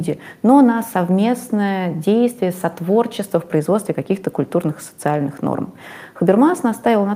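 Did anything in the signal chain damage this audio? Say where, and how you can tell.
No, nothing in the chain audibly damaged this audio.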